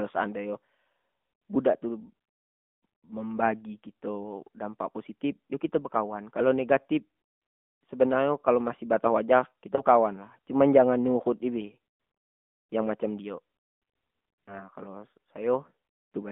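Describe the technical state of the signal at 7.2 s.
At 7.2 s the speech carries AMR narrowband mobile codec damage, present across the whole clip. The band is confined to roughly 200 Hz to 3.5 kHz, and the vocal-tract model rebuilding each 20 ms frame from sparse pulses gives a plainly audible buzzy, synthetic quality, which fits the 10.2 kbps mode.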